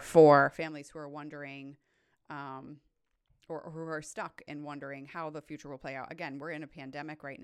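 A speech clip with zipper noise from 0.34 to 0.72 s, before "who are wondering um": a roughly 20 dB drop made in unsmoothed 1 dB steps, about fifty a second, ticks instead of fading cleanly.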